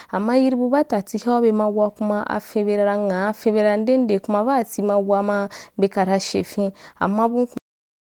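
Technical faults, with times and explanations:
7.58 s to end, cut-off end: the speech halts mid-sound and the last 0.44 s is digital silence, because the final buffers were never written out. The waveform drops straight to a flat line with no decay, and the spectrogram ends in a sharp vertical edge.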